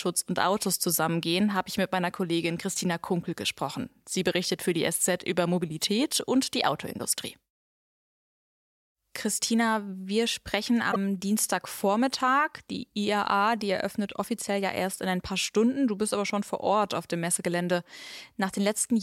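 At 10.89 to 10.96 s the speech breaks up for about 76 ms: damaged data in a compressed stream. Corrupted frames made the decoder lose sync and hunt for the next header.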